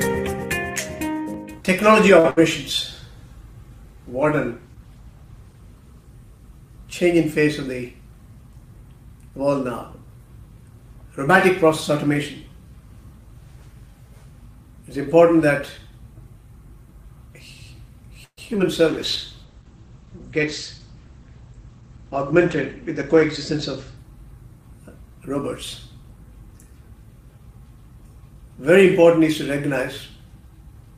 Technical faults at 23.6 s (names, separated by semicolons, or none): call bitrate drop; jitter buffer speed-up